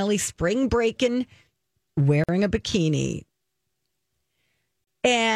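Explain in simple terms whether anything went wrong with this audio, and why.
The speech briefly drops out twice: a silence of about 49 ms at 2.24 s, just before "a bikini", and about 31 ms at 4.84 s. Each time, the sound stops and resumes where it left off. These are gaps at a join of encoded pieces: the audio was compressed in separate chunks and joined without trimming the padding each chunk carries.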